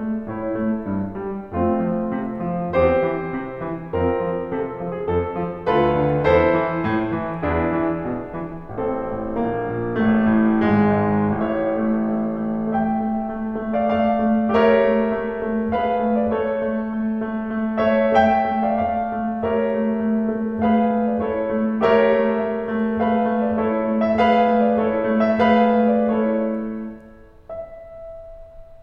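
Listening closely to the music, nothing stood out as a technical fault at any point.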